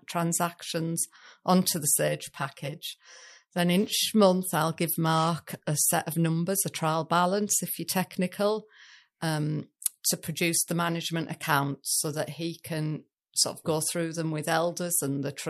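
From 2.08 to 3.59 s, one channel runs about 5 ms behind the other before the two are folded to mono, causing channel delay (comb filtering). Shared content cancels at evenly spaced notches starting near 100 Hz, so the speech turns hollow and phasey.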